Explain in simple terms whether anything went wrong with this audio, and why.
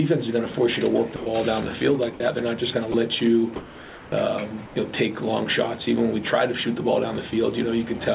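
Four brief dropouts occur where the sound is swapped for plain hiss: at 0.52 s, from 1.16 to 1.26 s, from 2.14 to 2.2 s, and at 2.92 s. These are sound dropped by the voice detector. The sender likely judged real sound to be background and stopped transmitting, so filler noise played until transmission resumed.

From 3.56 to 4.12 s and again from 4.66 to 4.76 s, the natural background gives way to a smooth, featureless hiss. This is comfort noise in place of the background. During those pauses the sender likely went quiet and the receiver generated synthetic noise, which is quieter in the second stretch. All of this comes through a call path that carries nothing above 4 kHz.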